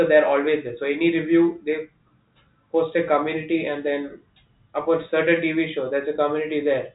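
No faults are audible in this speech; it carries the narrow telephone band of G.711 A-law coding, with nothing above about 3.8 kHz.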